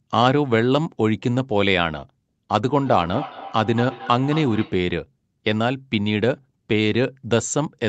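From 2.79 to 4.9 s, a second device's playback re-enters the microphone, causing feedback echo between two devices: ringing repeats roughly a fifth of a second apart, about 13 dB below the speech.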